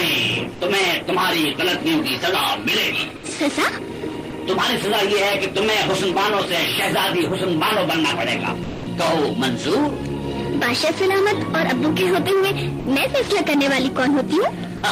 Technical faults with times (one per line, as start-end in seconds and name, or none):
0.54-0.60 sound dropped by the voice detector
3.16-3.23 sound dropped by the voice detector
4.30-4.32 sound dropped by the voice detector
8.63-8.86 sound dropped by the voice detector
12.79-12.86 sound dropped by the voice detector
14.77-14.82 sound dropped by the voice detector